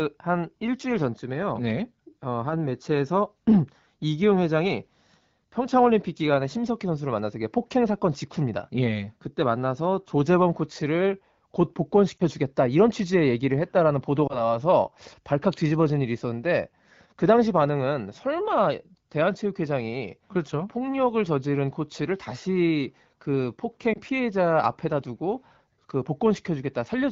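Lost AMR speech frames occur at 12.18 to 12.23 s, 14.27 to 14.41 s and 23.93 to 23.99 s. Each time, one 20 ms frame failed its checksum after radio errors, and the AMR-WB decoder, which sounds like it is running near 12.65 kbit/s, filled the gap by repeating the last good pitch and vocal tract settings at reduced gain. The result is a short dip or warble in the speech, most drawn out at 14.3 s.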